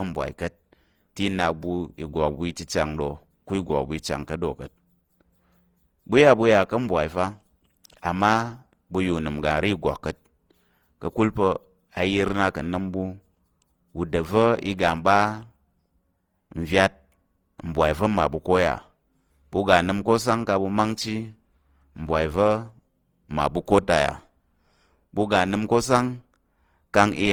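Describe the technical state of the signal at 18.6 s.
At 18.6 s the speech sounds swirly, smeared and hollow, with blurred attacks, as it does throughout the clip. The likely cause is generation loss: about seven passes through a lossy codec resembling Opus near 48 kbit/s, each requantising on a shifted frame grid, with nothing above 20.2 kHz.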